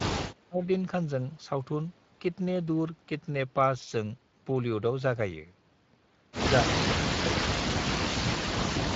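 From the very start the whole clip carries the Speex codec sound. The damage is plainly audible, a grainy, hoarse edge on the speech where the codec hasn't enough bits to rebuild the excitation cleanly. Any top end sounds like a thin noise wash rather than real detail. The overall character points to a bitrate in the 20 kbps region.

Layered on that, the speech ducks hard three times, each drop likely a case of speech suppressed in double talk. The echo canceller apparently heard the far side talking over this one and pulled everything down. From 0.00 to 0.66 s it's gated for about half a second, sinking by about 35 dB. Then there's a quick dip of around 150 ms between 6.62 and 6.76 s, again about 35 dB. From 7.17 s to the end it drops for about 1.5 seconds, down by about 40 dB at its worst.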